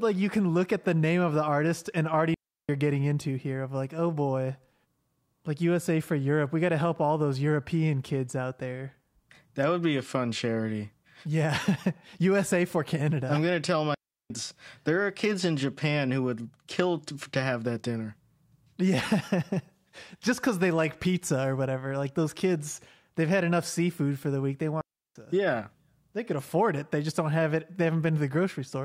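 Three clean holes of near silence cut through the speech, each about a third of a second long and with no click or burst of noise at either edge: at 2.34 to 2.69 s, right after "the artist and already" and before "getting into here of"; at 13.94 to 14.30 s, after "I'm gonna tell"; and at 24.81 to 25.16 s. These are digital wireless dropouts. The radio link lost too much data, so the receiver muted with a very short fade rather than pass on corrupted sound.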